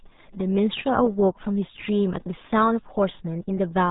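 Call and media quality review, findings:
RealAudio 14.4 codec, whole clip: speech muffled and gargly, nothing above 3.8 kHz. Heavy low-rate coding smearing the voice, which fits an 8 kbit/s dial-up-era speech codec. Probable component: the encode step somewhere upstream in the chain.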